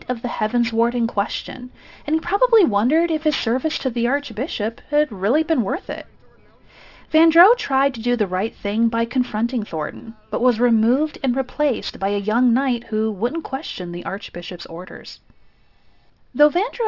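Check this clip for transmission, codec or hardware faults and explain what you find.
One fault is present, and it runs through the whole clip: aliasing. The audio appears to have been downsampled, which fits a drop from 44.1 kHz to 12 kHz, with no anti-alias filter beforehand. Content above the 6 kHz fold point was not removed. It was mirrored back below 6 kHz onto unrelated frequencies, roughly 20 dB under the signal. The result is a gritty, metallic edge on bright sounds, with energy packed hard against the 6 kHz band limit.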